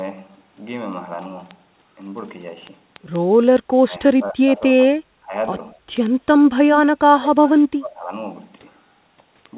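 From 0.15 s to the end, word clock ticks recur about every tenth of a second: sharp clicks of uneven strength where one sample is dropped or repeated each time, because the receiving device is free-running against the sender's clock, which fits an error of around 200 ppm.

Between 3.87 and 5.33 s the level dips by up to about 20 dB in pieces, and again briefly at 5.75 to 5.82 s by about 10 dB. This is speech suppressed in double talk, likely an echo canceller pulling the near talker down while the far side speaks.

The same ducking returns from 7.13 to 7.44 s, about 25 dB deep. At 7.47 to 7.59 s an echo leak follows: a copy of the voice 302 ms late, about 20 dB under the speech, likely slipping past the loudspeaker-side canceller. From 7.69 to 8.12 s the voice is suppressed once more, by about 25 dB.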